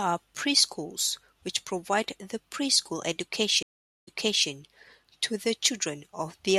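At 3.63 s a stream reconnect breaks the speech: about 0.45 s of silence, then playback restarts from a fresh decoder 0.41 s earlier, so a stretch is heard twice. That repeat, rather than a simple gap, marks it as a reconnect instead of a dropout.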